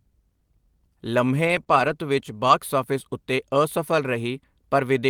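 From 1.47 to 1.61 s, a lost packet was rebuilt from error correction. About 80 ms of speech plays from a low-bitrate backup copy carried in the next packet. There is no gap. The sound turns rougher and noisier.

Between 1.63 and 1.68 s comes a short concealed packet loss. About 20 ms never arrived. The decoder stretched the preceding sound to fill the hole, then blended back. It is heard as a brief smear.

The same error-correction repair returns from 1.68 to 1.90 s, covering about 120 ms with the same grainy texture. A shorter one, about 40 ms, runs from 2.48 to 2.54 s, just before "ਆਫਿਸ ਉੱਤੇ ਅਸਫਲ".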